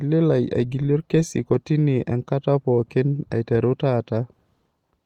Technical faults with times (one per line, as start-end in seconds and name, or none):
none